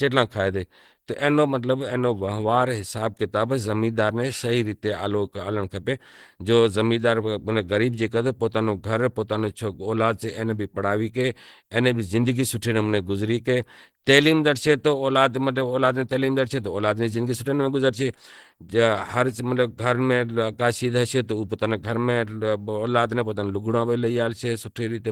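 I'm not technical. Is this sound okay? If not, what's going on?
No. From start to finish the speech has a rough, grainy edge, with a hoarse quality, and the damage is plainly audible. The likely cause is Opus compression at a low data rate, where the encoder runs in a mixed speech-oriented mode and, short of room, fills in detail with noise instead of the true sound. The full range of treble is still present.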